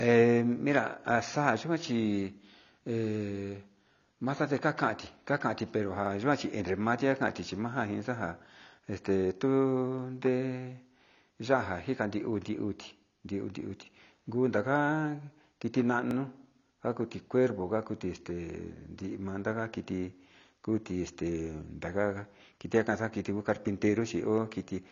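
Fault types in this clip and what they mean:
AAC compression: The speech has a hard ceiling at 7 kHz, with nothing above it, and plainly audible codec damage throughout. Sibilants and consonant edges sound dull and smeared, and sustained vowels have a warbling, fizzy grain. This is likely AAC-LC encoding at a low rate, which fits roughly 24 kbps. At that rate the encoder lowers its bandwidth and quantises the remaining spectral lines coarsely against its hearing model.
Overlapping chunks: At 6.06 s, just after "kakanti pero", and again at 16.11 s, a 50 ms slice of speech plays twice, producing a brief stutter or click at the join. The two events are about 10 s apart, which points to the audio being handled in 10-second chunks. Each chunk starts 50 ms before the previous one ended, so that overlap is duplicated at every boundary.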